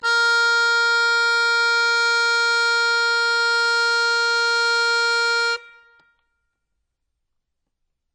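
Right from the start and all the way through, the music sounds dull and smeared, with nothing at all above 10.2 kHz and a warbly, fizzy texture on sustained tones. That's most likely AAC compression, and heavy at that; the damage is plainly audible and fits a low bitrate, something like 24 kbps. At that rate the encoder drops the top band and quantises what's left so coarsely that gaps and shimmering artefacts creep in.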